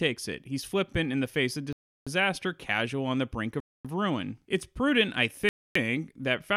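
At 1.73 s, right after "in the face of", the speech drops to dead silence for about 0.34 s and then carries on with "casual on the brink". It happens again at 3.60 s, after "casual on the brink", for 0.25 s before "of ruin", and once more at 5.49 s, after "prudent I", for 0.27 s. These are likely Bluetooth stalls: interference held up packets, the headphone buffer emptied, and playback simply froze until the resent audio turned up.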